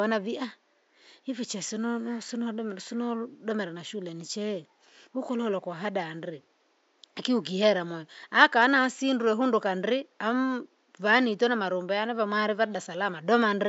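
No technical faults can be heard anywhere in this speech recording. A faint room noise sits about 42 dB below the speech, a normal part of the recording space, not a system problem.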